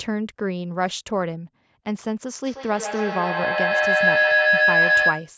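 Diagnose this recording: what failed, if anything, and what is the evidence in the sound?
From 2.44 s to the end, a tone near 1.5 kHz swells to about 7 dB above the speech, with the loop repeating roughly every 150 ms. This is feedback howl: a microphone-to-loudspeaker loop between call devices gains level on every pass.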